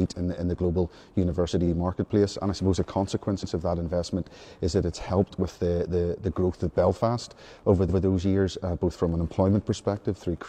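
The audio stutters three times, a sign of repeated frames. At 1.63 s a 46 ms block plays twice. At 3.39 s a 93 ms block repeats. At 7.85 s a 139 ms block repeats. Each fits whole compressed frames being written twice, lengthening the audio.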